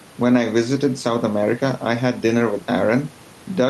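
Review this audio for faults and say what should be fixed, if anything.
Gain pumping runs through the whole clip: the gain swings by roughly 5 dB, pulling loud and soft parts closer together, likely from a fast limiter fighting overly high mic gain. Drop the input gain and let the compressor work gently.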